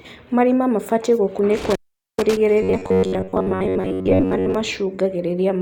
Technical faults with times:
1.57-2.37 intermittent contact
2.63-4.55 robotic sound from repeated short buffers

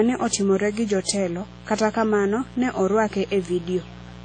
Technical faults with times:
0.00-4.24 mains buzz
0.00-4.24 transcoding between lossy codecs

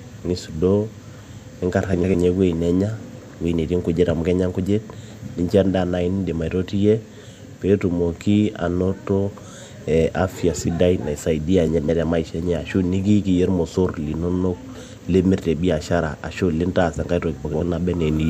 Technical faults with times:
1.93-2.15 frames out of order
11.67-11.89 frames out of order
17.45-17.61 frames out of order

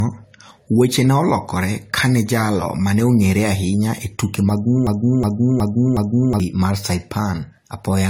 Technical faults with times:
0.00-8.10 generation loss
4.87-6.40 broken-record loop

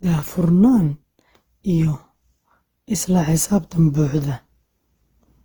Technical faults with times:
0.00-5.45 generation loss

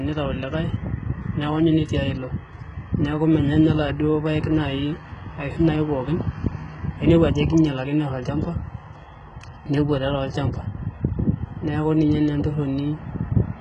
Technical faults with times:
0.00-13.61 HE-AAC compression

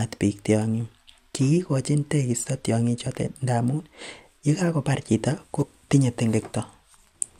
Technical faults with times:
3.06 compressed frames skipped
5.62 compressed frames skipped

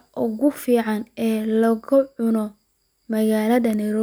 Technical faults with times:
none

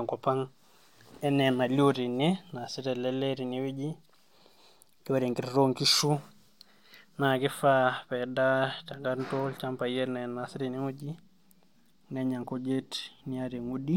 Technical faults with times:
none

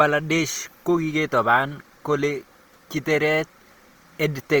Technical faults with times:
0.00-4.60 Opus compression

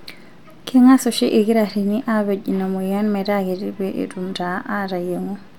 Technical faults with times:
none

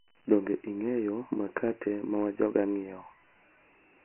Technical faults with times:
0.00-4.05 Dialogic VOX ADPCM

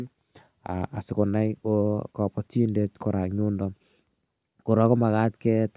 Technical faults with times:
none

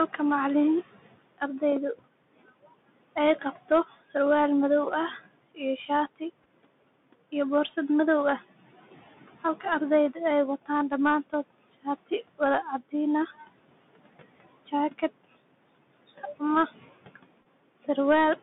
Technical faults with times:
0.00-18.42 noise suppressor artifacts
0.00-18.42 Bluetooth CVSD headset codec
1.38-4.15 speech cut by the noise suppressor
5.55-6.22 speech cut by the noise suppressor
6.43-6.47 Bluetooth headset packet repeated
9.60-13.45 speech cut by the noise suppressor
14.66-15.38 speech cut by the noise suppressor
16.08-17.17 speech cut by the noise suppressor
17.41-17.46 Bluetooth headset packet repeated

